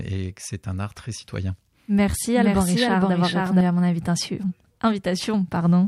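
After "un art très citoyen", from 1.99 s to 3.61 s, the speech has a doubled audio track. A second full-band copy trails about half a second behind, at roughly equal level, with no room colour. It starts and stops abruptly before "à mon invitation", likely from a second, slower capture path.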